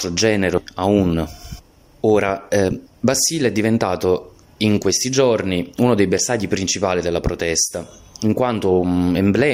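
At 0.57 to 0.59 s a skip ahead occurs: about a second of audio was discarded while later audio was already queued, so playback leaps forward with no fill, and the sound on either side of the missing stretch is butted together almost seamlessly.

Jitter buffer speed-up follows twice, as the receiver trims excess queued audio by cutting out short pitch-period slices: from 1.13 to 1.99 s it runs at 106% speed, shedding some 50 ms, then from 2.49 to 4.56 s at 111%, shedding around 200 ms. Pitch stays put, but the sound feels rushed.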